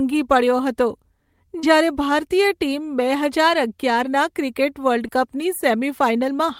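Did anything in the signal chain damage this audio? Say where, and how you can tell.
Yes. On the network side, short concealed packet loss hit at 1.59–1.65 s, just before "જ્યારે ભારતીય ટીમ બે", and at 5.07–5.10 s: about 40 ms and 20 ms of audio arrived too late, so the receiver extended the preceding sound and crossfaded back, leaving a brief smeared, wobbly patch.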